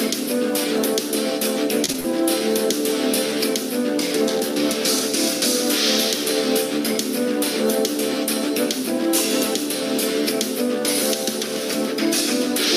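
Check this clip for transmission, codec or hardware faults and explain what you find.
There is one transmission fault, short concealed packet loss, occurring three times in quick succession: 1.85 to 1.90 s, 1.92 to 1.96 s, and 2.00 to 2.06 s. Brief stretches of audio, 20 to 40 ms each, failed to arrive in time, and the receiver patched each gap by extrapolating the preceding sound before easing back into the real signal. Each one is a quick smear or wobble rather than silence, which distinguishes it from a hard dropout or a click.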